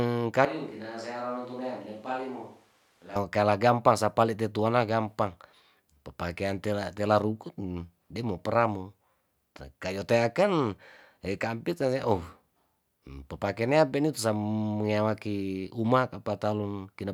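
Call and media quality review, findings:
Switch to a distant microphone, 0.45 to 3.16 s. Close mic likely dropped, capture falls back to a far pickup. Speech abruptly roomy, hollow, thin low end, about 10 dB quieter, room noise roughly 30 dB under speech. Snaps back before "keala gampang sapale tetuana".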